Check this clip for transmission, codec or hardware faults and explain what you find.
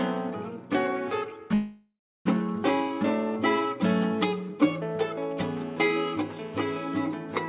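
Two faults stand out in this music, which has come through a phone-band call path with nothing above 4 kHz.

From 1.54 to 2.27 s the music halts. The last sound smears into a fading tail and then about 0.32 s of silence before the music resumes exactly where it stopped. Nothing is skipped, which sets it apart from packet loss. This is likely a call audio freeze, where delayed packets drained the jitter buffer.

From 5.37 to 6.74 s a hard, raspy buzz at 217 Hz with dense harmonics sits about 23 dB below the music. This is GSM phone buzz: a nearby 2G phone's transmit bursts are being rectified in the audio circuitry. Its 217 Hz rate and rasp distinguish it from 50 or 60 Hz mains hum, and it holds steady, consistent with a phone in a call.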